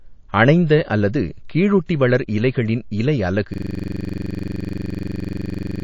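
The speech carries damage from start to finish that is most likely MP3 compression, with the coding damage plainly audible. The encoder seems to have been starved of bits, pointing to something near 32 kbps. It discards the treble above a fixed cutoff and lets weak frequency lines drop in and out between frames. The voice sounds dull and watery, with a swirling quality on sibilants and consonant onsets that smear.

Two pre-echoes follow from the same coding. The encoder stayed on long transform blocks and never switched to short ones for sharp onsets. So the quantisation noise sized for each loud attack spread backward into the quiet just before it. At 0.67 to 0.70 s, about 29 ms of hiss rises roughly 11 dB ahead of the attack. At 1.87 to 1.89 s, about 26 ms of hiss rises roughly 12 dB. Both attacks land softened and blurred.

From 3.54 s to the end, a system hang loop takes over. The computer or its driver stopped supplying new audio while the sound hardware kept replaying one ring buffer, which fits a 2048-sample buffer. 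A single 42.67 ms fragment repeats about 54 times at 23.4 Hz. It is heard as a rapid mechanical stutter, close to a low buzz, that never recovers.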